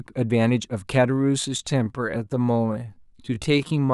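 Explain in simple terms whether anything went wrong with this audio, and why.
Time-stretched section, 1.0 s to the end: the speech abruptly slows to 0.69 times its pace at the same pitch, so it drags, likely from software repeating tiny pieces.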